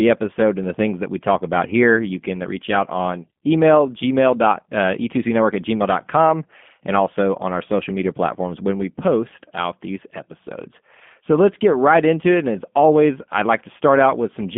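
Throughout, G.729 codec damage is plainly audible: the speech is confined to 150 Hz to 3.5 kHz, and rebuilding it from a vocal-tract filter and sparse pulses, consistent with 8 kbit/s, leaves a rough, synthetic edge. Plain telephone band-limiting would sound muffled but not rough.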